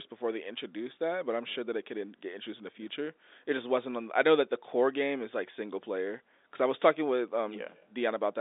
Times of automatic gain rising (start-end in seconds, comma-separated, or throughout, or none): none